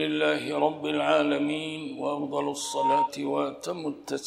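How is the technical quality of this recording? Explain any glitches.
The recording has one clear glitch, a loudspeaker feedback squeal from 2.60 to 3.10 s. A microphone is catching the output of the loudspeaker it drives, and at 927 Hz the gain around that loop tops unity, so the tone feeds on itself. It swells over roughly a third of a second into a steady whistle that ends up a few decibels louder than the surrounding sound, then stops.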